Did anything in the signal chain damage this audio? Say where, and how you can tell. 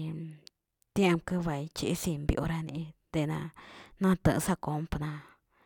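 No, nothing in the signal chain audibly damaged this speech recording, and the signal stays continuous and intact across its whole duration.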